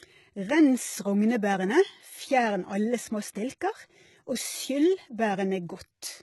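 From the start the speech has heavy codec damage. Nothing reaches above 11.8 kHz, and the treble below that edge sounds synthetic, with s sounds turning gritty and lispy. This is likely HE-AAC compression, which codes only the lower spectrum and rebuilds the highs by copying lower bands upward under a coarse envelope. The copied harmonics do not match across the crossover. The degree of damage fits a very low bitrate, around 16 kbps.

From 3.33 to 3.35 s there is pre-echo. A short hiss arrives about 23 ms ahead of a sharp onset, and the attack sounds softened and smeared. The transform coder spread quantisation noise sized for the loud transient evenly across its block, so the noise also filled the quiet stretch just before the attack, where nothing louder could mask it.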